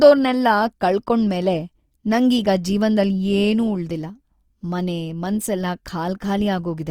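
From start to finish, the speech carries plainly audible codec damage, likely from Opus compression. The bandwidth stays full, with content reaching about 20.2 kHz. Instead, the damage sits in the texture. Bands that ran short of bits have been filled with folded or noise-like content. So the voice sounds grainy and rough, with a noisy edge on tonal parts. The graininess points to the music mode at a low rate, near 24 kbps.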